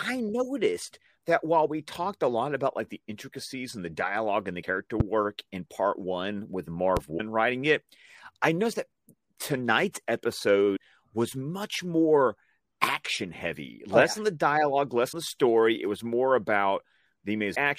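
At 4.61 s, right after "the dialogue and the", there's a brief glitch about one 26 ms frame long. It sounds like a broken MP3 bit reservoir, likely from frames dropped so the next one reads borrowed bytes from the wrong frame. The same glitch comes back at 7.17 s, just before "writing it I noticed", and again at 10.75 s, 15.11 s between "yeah on the dialogue" and "the story", and 17.54 s. Between those, at 5.00 s and 6.97 s, you get a single loud pop each time, roughly 15 dB above the speech and about 30 ms long, with the speech carrying on underneath. That's most likely a voltage spike from a switch, plug or static.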